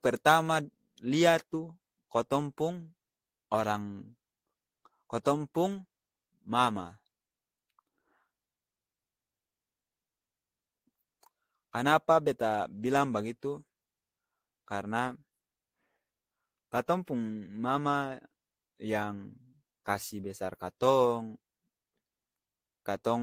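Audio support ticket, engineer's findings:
No faults found in the audio for this ticket.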